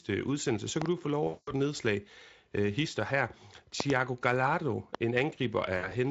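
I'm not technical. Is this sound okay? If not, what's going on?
No. Loud pops at 0.82 to 0.88 s (two, after "udsendelse så"), 3.80 to 3.92 s (two, after "et nedslag hister her") and 4.95 to 4.97 s: sharp thumps over the speech, likely from a plug, switch or static jolting the signal.

VoIP packet loss concealed by the speech codec at 1.27 to 1.53 s, between "du få" and "et nedslag hister her", and 5.77 to 5.94 s: lost internet data, about 200 ms and then 80 ms, was patched by guessing, giving a buzzy or noisy, fading smear.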